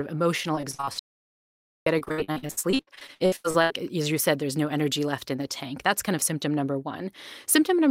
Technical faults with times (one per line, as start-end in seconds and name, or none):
0.55-3.72 repeated packet loss (robotic sound)
0.99-1.86 audio dropout to silence